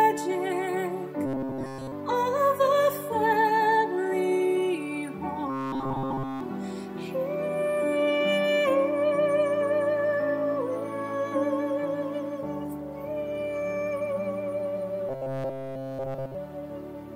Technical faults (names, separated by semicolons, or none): robotic sound from repeated short buffers